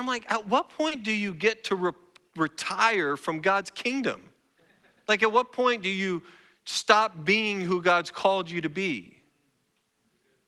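At 0.88 s, between "I'm like at what" and "do you get to", a short concealed packet loss fills a 30 ms gap: the receiver extends the preceding sound and blends back, heard as a brief smear. On a spectrogram, high content above the call codec's 12 kHz ceiling is absent.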